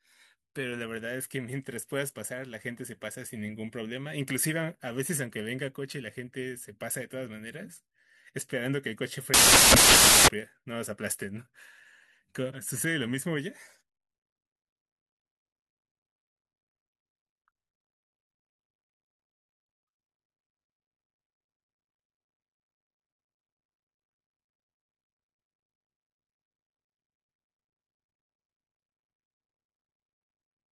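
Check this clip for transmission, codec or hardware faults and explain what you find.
There is one fault in this speech clip. From 9.34 to 10.28 s, samples built from the wrong bytes turn the audio into loud, harsh broadband noise. The reader assembles each sample with misaligned or swapped bytes, so the noisy low bits dominate.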